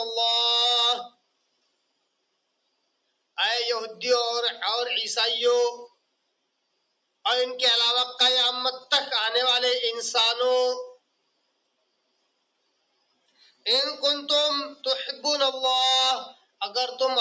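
A call's noise suppressor misjudged steady parts of the sound as background noise and pulled them down far harder than the rest, producing sound cut by the noise suppressor from 1.09 to 3.38 s, 5.88 to 7.25 s, 10.94 to 13.66 s and briefly 16.33 to 16.61 s. At its deepest the level sinks by about 22 dB, so sustained passages sag and tails are clipped short while sharp onsets still come through. The call microphone processing caps everything at 8 kHz.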